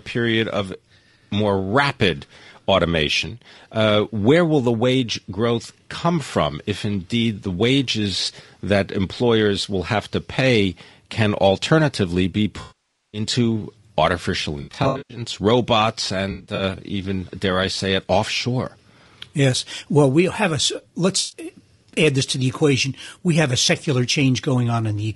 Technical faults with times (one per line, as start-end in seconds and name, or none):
0.00-25.15 low-delay AAC compression
12.61-13.21 AAC frame loss with concealment
14.61-15.21 AAC frame loss with concealment
16.31-16.63 AAC frame loss with concealment
21.19-21.39 AAC frame loss with concealment